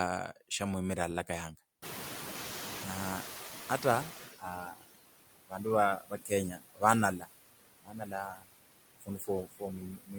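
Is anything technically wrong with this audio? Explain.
Yes, there's a noise suppressor working hard on this speech clip, and you can hear three kinds of trouble from it.

Noise suppressor artifacts run through the whole clip. The suppressor estimates the steady background in each frequency band and pulls it down by about 15 dB, frame by frame. So the background dips in the gaps and comes back up under the talking.

The noise suppressor is catching up from 1.82 to 4.35 s, just after "shamwimirire alalakayanga". Around 2 s the room noise jumps by about 23 dB, settling roughly 11 dB under the speech. The suppressor's noise estimate lags behind that jump, so the louder background leaks through with little reduction at first. It then sinks over about 2.5 s as the estimate catches up and the cut settles at about 14 dB.

Speech is cut by the noise suppressor six times, at 4.39–4.87, 5.47–5.66, 5.98–6.83, 7.19–7.28, 7.84–8.51, and from 8.99 s to the end. 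The suppressor mistakes parts of the voice for background and turns them down by about 15 to 22 dB at the deepest. The first five stretches each lose anywhere from a brief moment to about half a second of speech. Those bits sound swallowed and faint.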